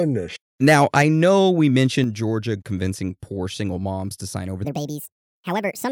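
From 0.67 to 1.31 s the loudest speech has microphone overload, about 5 dB past full scale, with the peak tops cut flat and a crackling edge on a small fraction of samples. The cause is likely input gain set too high for the converter. At 1.02 s, within that stretch, the microphone volume is stepped down by about 4 dB. Voice and background drop together in one abrupt step, likely the call software reacting to the clipped peaks.

A second, milder overload between 1.76 and 1.82 s runs about 1 dB over and adds a brief harsh grit. At 2.04 s the level steps down again, by about 5 dB.

From 4.65 s, right after "moms to sign over", to the end at 5.91 s, the section plays at the wrong speed, 1.5 times too fast. Pitch rises by roughly seven semitones, so the speech sounds high and hurried. The likely cause is playback against a mismatched clock.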